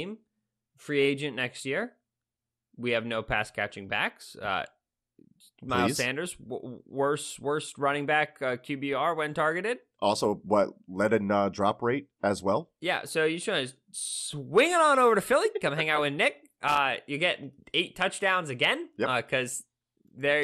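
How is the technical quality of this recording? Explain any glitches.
The recording has two audible problems: a dull, gurgly coding texture across the whole clip and a short crackle near the end.

Throughout, the upper bands flicker and the sound turns granular and gurgly, likely MP2 compression at a low rate, about 80 kbps. Starved sub-bands switch off. Unlike a plain low-pass filter, this leaves unstable, watery distortion.

From 16.68 to 16.77 s, loose connector crackle: a worn contact repeatedly breaks the signal, giving an irregular scratchy burst, unlike the steady, periodic ticks of a buffer dropout.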